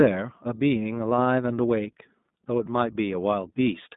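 A speech clip carrying iLBC codec damage throughout, plainly audible as a rough, slightly synthetic texture. A spectrogram shows energy confined to roughly 150 Hz–3.7 kHz and nothing above 3.8 kHz, and the codec runs on 20 ms frames, which fits the 15.2 kbps mode.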